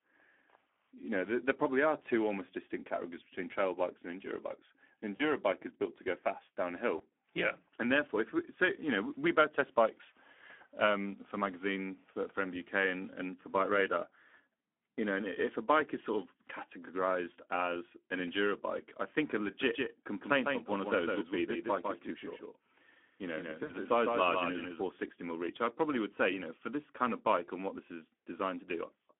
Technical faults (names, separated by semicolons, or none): Speex codec; VoIP packet loss concealed by the speech codec; doubled audio track